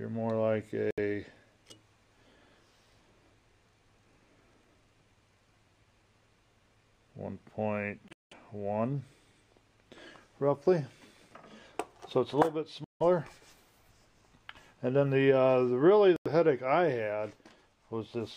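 Short silences cut into the audio at 0.91, 8.08, 12.84 and 16.16 s, lasting about 70, 230, 160 and 90 ms. The 8.08 s gap is broken, with its longest hole near 190 ms. Each resumes as if playback ran on, a likely Bluetooth dropout from late wireless packets.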